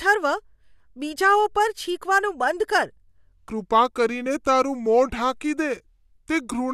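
Speech, with a section at the wrong speed from 3.49 s to the end at 6.73 s: playback drops to 0.785 times normal, pitching the voice down about four semitones and dragging it out, likely from resampling against the wrong clock. A spectrogram shows harmonics and formants stepping lower, with syllables visibly stretched.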